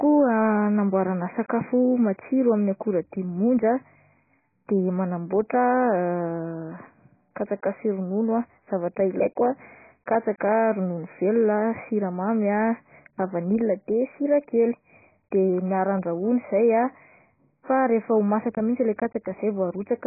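Speech, with AAC compression damage throughout: nothing reaches above 2.5 kHz, so the sound is dull and muffled, with a warbling, smeared texture on sustained sounds and sibilants. This points to heavy quantisation, likely from AAC-LC encoding at a very low bitrate around 12 kbps.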